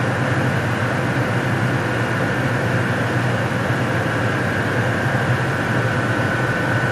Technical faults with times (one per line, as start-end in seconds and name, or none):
none